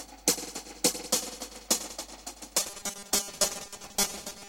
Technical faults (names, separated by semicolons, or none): robotic sound from repeated short buffers